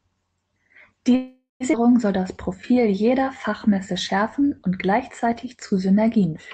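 From 1.15 to 1.63 s there is a call audio freeze. The last sound stretches into a fading buzz or hiss, ending in about 150 ms of silence. Delayed packets likely drained the jitter buffer.

At 1.72 to 1.76 s the audio skips ahead. Roughly 0.4 s is dropped, and the two sides join almost directly.

From 2.20 to 5.68 s a jitter buffer slow-down repeats pitch periods to rebuild its reserve. It adds 368 ms, so the speech runs at 90% speed with unchanged pitch.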